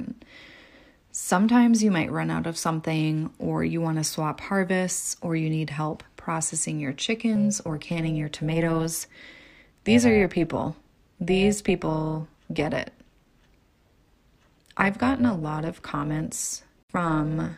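Speech, with overlap-add ripple from 7.36 s, just after "need help processing your", to the end at 17.58 s. The level pulses by about 6 dB at around 300 Hz, once per frame, because the windowed frames were rejoined with an overlap whose gains do not sum flat. It sounds like a metallic buzz with extra tones around the voice. Unlike a slow tremolo effect, the rate is fast and completely regular, locked to the frame spacing rather than to the pitch of the speech.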